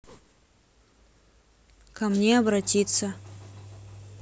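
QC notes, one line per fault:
Nothing stood out on listening to the speech in this clip.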